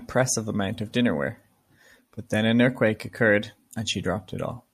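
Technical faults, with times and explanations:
No technical faults can be heard anywhere in the clip.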